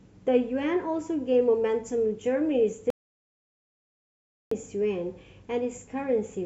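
At 2.90 s the speech cuts off abruptly into dead digital silence, with no room tone, until it returns mid-flow at 4.51 s, leaving about 1.6 s missing. This audio dropout to silence likely came from the input being lost while silence kept being written.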